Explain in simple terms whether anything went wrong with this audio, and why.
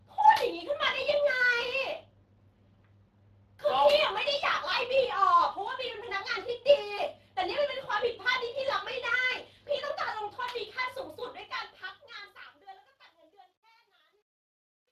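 Yes, two things went wrong. The whole recording runs through the Speex codec, an old voice-chat compressor squeezing the speech hard enough that it sounds plainly hoarse and noisy.

The ending fades out from around 11 s, but from 11.14 s there's truncation distortion on a fade. The volume stage keeps too few steps, about what an 11-bit stage would give. The quiet tail turns gritty, worst from 12.59 s to the end at 14.92 s.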